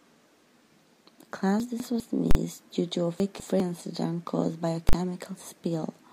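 Between 1.6 and 2.0 s, chunks out of order: a 200 ms chunk plays one place late, so the speech jumbles at the hard joins but nothing is missing, unlike a dropout. At 2.31–2.35 s, just before "due to a", invalid numbers at full scale pin a 40 ms block to one extreme value, giving one very loud bang rather than distorted speech as in clipping. The reordering returns at 3.2–3.6 s, after "due to a" and before "incident caused by a". Another 40 ms full-scale block follows at 4.89–4.93 s, right after "incident caused by a".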